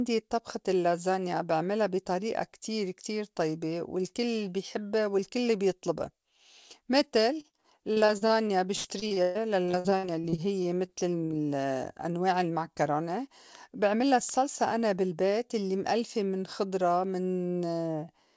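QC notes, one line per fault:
7.34–11.33 s, repeated packet loss (robotic sound): the speech turns choppy, with chunks missing. Packets were lost or arrived late over and over. Each hole was bridged by extending the preceding sound, with gaps up to 124 ms and concealment covering about a quarter of the span.
12.83–13.26 s and 13.69–14.12 s, jitter buffer speed-up: the speech briefly sounds hurried at unchanged pitch, running at 110% and then 107% speed. The receiver's buffer had built up extra delay, so it cut many pitch-period-sized slices, removing roughly 50 ms and 40 ms, to catch up.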